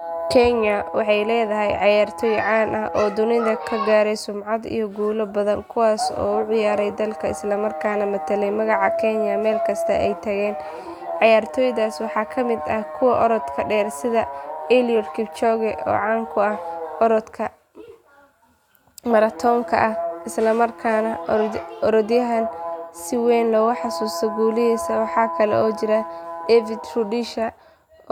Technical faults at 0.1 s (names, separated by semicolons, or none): none